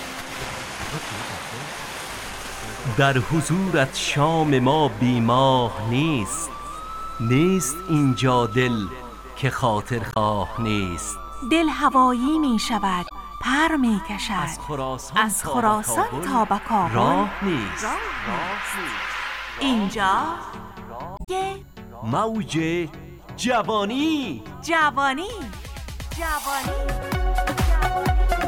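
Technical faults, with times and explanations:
10.10–10.16 s, 13.05–13.12 s and 21.15–21.29 s, damaged data in a compressed stream: three short bursts of garbled sound, lasting about 66 ms, 70 ms and 139 ms, heard as brief chirps or squawks cutting across the audio. Corrupted bytes in the encoded stream make the decoder misread those frames and lose sync, so it outputs nonsense until it locks onto a valid frame header and resumes clean decoding. The longest event at 21.15 s suggests a larger stretch of bad data.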